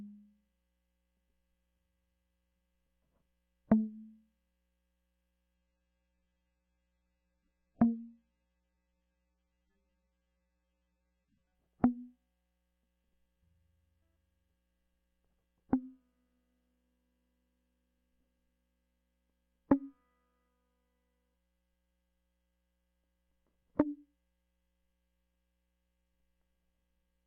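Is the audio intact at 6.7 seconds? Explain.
No. At 6.7 seconds the music is inside a stretch of adaptive stream at a lower bitrate, running from 5.55 to 11.55 s. The stream switched to a much lower-rate version, which points to a drop from about 96 to 16 kbit/s AAC, so the treble collapses and the sound turns swirly and smeared. On a spectrogram the upper band is abruptly cut away across that span, while the waveform shows no gap at either switch.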